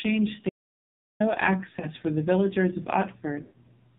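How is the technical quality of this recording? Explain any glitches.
Technical quality is poor. The speech is heavily compressed and has one silent gap and two decoder concealment glitches.

AMR narrowband mobile codec, throughout: nothing above 4 kHz survives, and the voice is buzzy and synthetic. The heavy damage points to a low AMR-NB mode, around 6 kbps.

Audio dropout to silence, 0.49 to 1.20 s: about 0.71 s of digital silence with no room tone. It is likely caused by lost input while recording continued.

Lost AMR speech frames, 1.80 to 1.87 s and 3.42 to 3.69 s: the decoder repeats earlier pitch and vocal-tract settings at falling gain. The first is a brief warble, consistent with one lost frame. The second, consistent with about six lost frames, drags out and fades, and the speech then returns rough.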